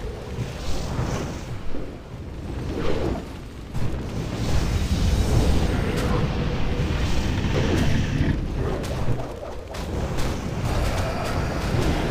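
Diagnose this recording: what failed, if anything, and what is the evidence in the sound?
The failure is likely at the buffer or storage stage, where the audio is handled in roughly 4-second chunks and a short piece goes missing at each handover. The result is audio missing between chunks. The sound skips abruptly at 3.74 s and again at 7.55 s, about four seconds apart. Each time, about a fifth of a second vanishes, and the audio on either side is butted together with no gap of silence.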